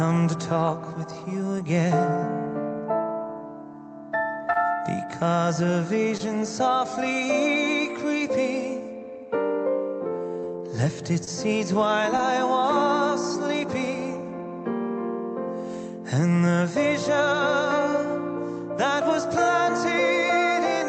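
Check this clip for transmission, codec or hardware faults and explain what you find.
Six network faults show up, all of them brief, in audio that has gone through a call codec whose high frequencies stop at about 8 kHz.

Short concealed packet loss occurs at 4.45, 6.17, 10.40, 11.24 and 12.17 s. Each is a brief smear or wobble about 40 ms long. In each case about 20 ms of audio never arrived in time. The receiver continued the preceding sound to fill the hole, then blended back into the real signal, so short sounds there can vanish.

A short stall from a late packet follows at 4.53 s. One sound is held too long, with a slight buzz or dip. A packet arrived late, the jitter buffer ran dry, and the receiver stretched the last sound by about 26 ms until it came. Playback then resumed where it left off, so nothing is lost, but the delay grows by that amount.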